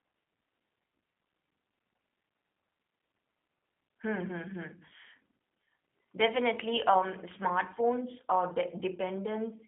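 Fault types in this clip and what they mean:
G.729 codec: throughout, the speech is resynthesised from a vocal tract filter, a pitch predictor and sparse pulses in each frame. This gives a plainly rough, synthetic edge within a band of about 200 Hz to 3.5 kHz, which fits the 8 kbit/s G.729A variant.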